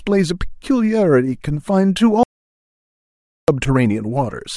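At 2.23 s the speech cuts off abruptly and the track drops to silence until 3.48 s, when the voice resumes mid-flow. This is an audio dropout to silence lasting about 1.25 s. No room tone or noise floor survives in the gap, so the recording chain was writing silence rather than capturing a quiet signal. The likely cause is a momentary loss of the input, such as a disconnected device, failed link or accidental mute. Whatever was spoken in that interval is gone.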